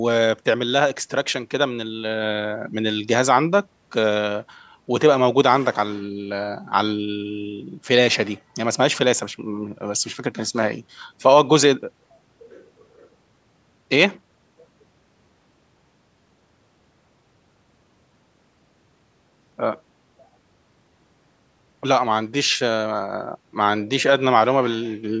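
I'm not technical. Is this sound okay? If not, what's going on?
Yes, no faults here.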